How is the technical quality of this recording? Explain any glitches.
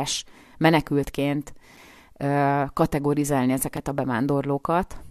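The recording has a gap between stream segments, twice, at 1.77 s and 3.77 s. The timestamps of adjacent 2-second segments leave about 5 ms uncovered, and the player fills it with silence, so the speech breaks with a brief, hard-edged dropout. Nothing is lost.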